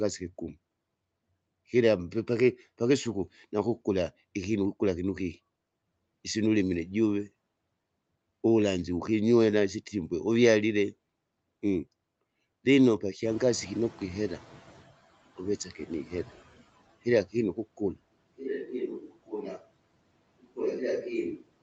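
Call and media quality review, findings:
Noise suppressor catching up, 13.23–14.96 s. Room noise jumps about 13 dB near 13 s. The suppressor's noise estimate lags and takes 1.73 s to adapt. Background passes under-reduced at first, then sinks by about 16 dB as the estimate settles.

Speech cut by the noise suppressor, 15.65–15.91 s. Suppressor misreads brief speech as noise. Roughly a tenth of a second is pulled down, deepest about 12 dB, and it sounds faint. Second instance, 18.99–19.63 s, is heavier: drop about 19 dB deep, roughly 0.3 s affected. Speech there sounds swallowed.

Switch to a distant microphone, 18.12 s to end. Sudden change to roomy, hollow, bass-light sound. Level down about 5 dB, and room noise sits roughly 30 dB below speech. Likely cause: the close-mic feed was lost and capture fell back to a farther microphone. There is no switch back before the clip ends.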